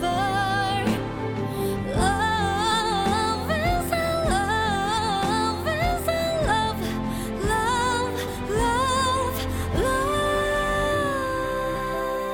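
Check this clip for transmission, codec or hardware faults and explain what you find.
There are five short jumps where the audio lurches forward and part of the sound goes missing: at 0.97–1.00 s, 2.71–2.74 s, 4.97 s, 6.49 s and 8.27 s. These are compressed frames skipped. Whole frames were never decoded, so playback leaps ahead by roughly 70 to 200 ms each time, a span that fits whole 20 ms frames.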